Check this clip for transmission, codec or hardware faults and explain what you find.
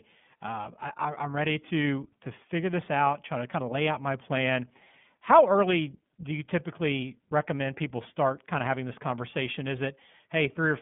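There's one fault, and it runs through the whole speech clip: the iLBC codec. Each 30 ms frame is coded on its own, giving a plainly rough, slightly synthetic edge, which fits the 13.33 kbps mode. The band sits around 150 Hz to 3.5 kHz, with nothing above 3.8 kHz.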